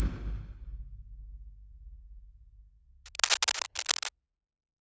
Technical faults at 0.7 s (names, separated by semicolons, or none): noise suppressor applied to music or sounds